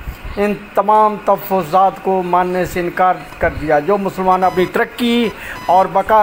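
Computer activity noise starts at 3.32 s and runs to the end: a chirping buzz pulsing at around 1 kHz, about 20 dB under the sound. Changing processor or graphics load disturbs the ground shared with the audio circuit, so the buzz follows the machine, not the audio.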